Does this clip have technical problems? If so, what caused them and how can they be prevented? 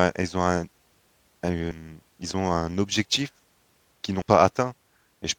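Yes. Damaged data in a compressed stream causes two short glitches in this speech: at 1.70 to 1.72 s, just before "ils ont un objectif", and at 4.21 s. Corrupted bytes made the decoder misread frames and lose sync until the next header. Checksummed, reliable transport and storage prevent this.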